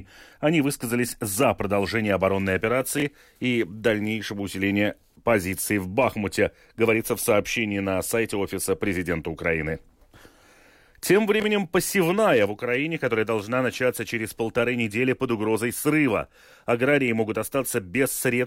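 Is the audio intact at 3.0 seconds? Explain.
No. Between 2.98 and 3.02 s, after "за продолжение оборонной" and before "и дальнейшего усиления позиций", the chunks are out of order: a 20 ms chunk landed one chunk late, after its successor. The three hard joins make a brief jumbled blip.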